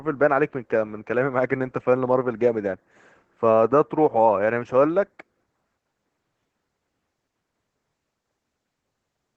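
Throughout the speech, Opus voice compression in its SILK mode is plainly audible: coarse excitation coding makes the voice hoarse and faintly robotic, which fits a low bitrate near 12 kbps. A spectrogram shows a hard ceiling at 8 kHz and blurred, grainy harmonics below it.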